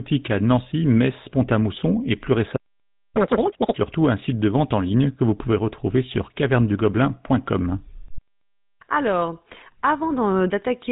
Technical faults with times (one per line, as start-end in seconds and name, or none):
0.00-10.91 GSM full-rate codec
3.17-3.75 catch-up at higher speed